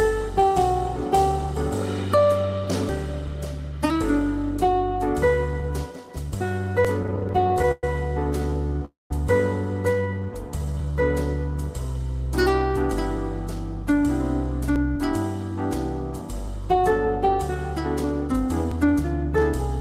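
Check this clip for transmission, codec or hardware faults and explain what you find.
Five kinds of fault are present: four short dropouts at chunk boundaries, a stretch of stutter, one freeze, a jitter-buffer slow-down and a longer jitter-buffer speed-up.

Audio missing between chunks occurs at 2.89, 6.85, 14.76 and 18.72 s, spaced in multiples of 4 s. Each is an abrupt skip of about 40 ms, with the material on either side butted together and no silence between. The regular 4 s spacing points to a recorder or processor working in 4 s blocks. It likely drops a short piece each time it closes one block and opens the next.

Repeated stalls (stutter) run from 7.03 to 8.82 s. The playout halts 27 times, with the longest hold lasting 114 ms. About 0.42 s of filler, roughly a quarter of that span, is inserted, and nothing is lost. Packets were arriving late or slower than real time, so the jitter buffer kept running dry. 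Each time, the receiver extended the last sound until data resumed, which gives a dragging, stuttering feel.

A call audio freeze follows from 8.85 to 9.11 s. The sound is held and fades out, leaving about 170 ms of silence within a 252 ms insertion. Playback then resumes where it stopped, with nothing missing. The added delay is 252 ms. The likely cause is packets held up in transit that emptied the jitter buffer, with the receiver bridging the wait with concealment until the stream returned.

A jitter buffer slow-down runs from 9.96 to 10.93 s. Playback drops to 83% speed at unchanged pitch, so sounds are drawn out, and 185 ms is added over that second. With its buffer low, the receiver rebuilt a reserve by repeating single pitch periods and pieces of pauses many times in succession. This stretches the timing without shifting the pitch.

A jitter buffer speed-up covers 12.93 to 19.36 s. 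Playback runs at 104% at the same pitch, removing around 0.3 s in total. The buffer held more than its target, as happens after a late burst of packets. To cut the latency, the receiver repeatedly dropped short segments of one or a few pitch periods.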